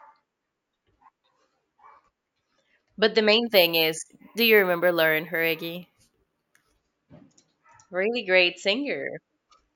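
From 3.47 s to 6.77 s, right after "the main", the speech shows imaging from sample-and-hold upsampling. The rate was raised by holding each sample rather than interpolating it through a smoothing filter, which fits a 16 kHz source raised to 48 kHz. Mirrored copies of the spectrum fill 8 kHz to 16 kHz at about 15 dB below the speech. They add a bright metallic fizz that rises and falls with the speech, and its lowest copy moves opposite to the pitch.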